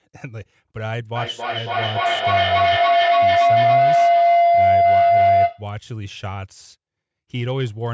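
A sound loop between two devices on the same call gained level on every trip, producing feedback howl from 1.16 to 5.73 s. The repeats grow rather than fade, narrowing to a tone near 700 Hz that pulses about every third of a second and peaks about 11 dB above the speech.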